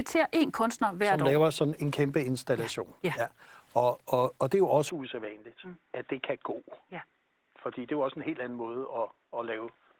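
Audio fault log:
throughout: Opus voice compression: speech sounds hoarse and slightly robotic, a low-rate hybrid coding consistent with about 16 kbps, coarsely coding the excitation in 20 ms frames.
4.90 to 9.99 s: input switched to a poorer device: speech abruptly turns dull and boxy, nothing above 3.8 kHz, slightly quieter with faint new noise, likely from a narrower-band microphone.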